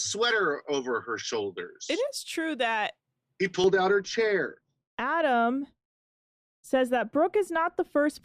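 From 3.64 s, right after "is true that he", wrongly applied de-emphasis dulls the speech: a spurious treble cut rolls off highs, about 11 dB down at 10 kHz, visibly dimming the spectrogram's upper bands.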